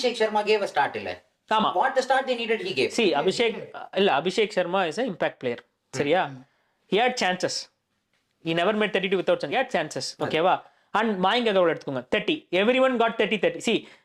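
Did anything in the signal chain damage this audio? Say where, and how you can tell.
Yes, at the codec or storage stage: compressed frames were skipped at 1.63 s and from 9.51 to 9.55 s. The audio jumps ahead by about 30 ms and then 50 ms, multiples of a 10 ms frame.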